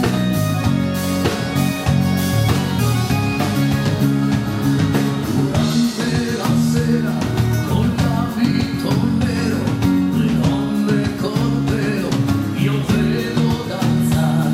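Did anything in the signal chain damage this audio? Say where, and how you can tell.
No, nothing in the signal chain damaged this audio.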